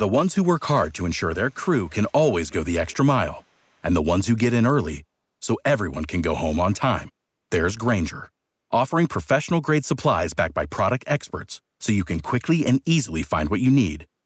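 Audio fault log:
0.78–0.93 s, 1.34–1.63 s, 1.87–2.12 s, 2.48–2.54 s, 2.87–2.96 s: echo leak. The far end's echo canceller likely let loudspeaker pickup through, so faint scraps of speech return 396 ms late, roughly 25 to 30 dB down.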